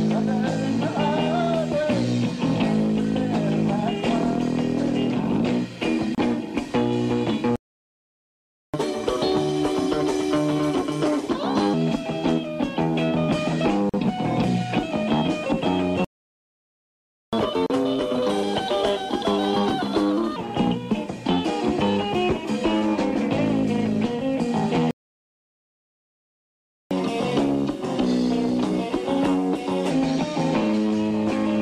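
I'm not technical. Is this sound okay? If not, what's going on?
No. There are three kinds of problem.

Gap at a join of encoded pieces: the audio was made in separate chunks and stuck together untrimmed, so brief silences cut in at 6.15 s (30 ms), 13.89 s (about 40 ms) and 17.66 s (35 ms).

Playback stall: the player likely ran short of data, so the sound stops mid-flow, from 7.56 to 8.74 s, 16.05 to 17.33 s, and 24.91 to 26.91 s.

Catch-up at higher speed: to win back lost time after each stall, the player speeds up, making sound faster and higher. This happens at 1.25 times speed (about four semitones up) from 8.74 to 11.74 s and 17.33 to 20.36 s, and at 1.15 times speed (about two semitones up) from 26.91 to 29.91 s.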